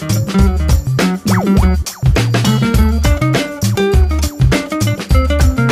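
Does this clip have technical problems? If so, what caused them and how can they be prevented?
No, nothing stood out as a technical problem on listening, so there is nothing here that needs preventing.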